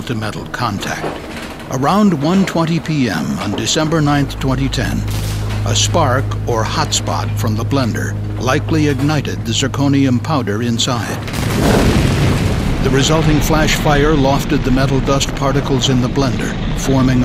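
No technical faults can be heard anywhere in the recording, and the signal stays steady and intact throughout.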